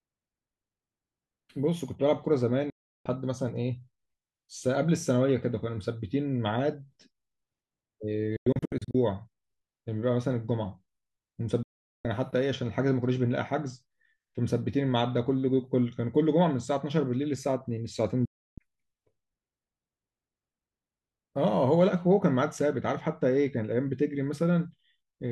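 The receiver repeatedly lost the digital signal, or received frames that failed their checks, and muted until clean frames returned. That is a digital broadcast dropout, and the speech drops to silence with an abrupt 3 ms fade at 2.70 to 3.06 s, 11.63 to 12.05 s and 18.25 to 18.58 s. From 8.36 to 8.95 s the loss is scattered into several short holes, the longest 96 ms. The gap lengths fit frames of roughly 32 ms, and whatever was broadcast during each gap is gone.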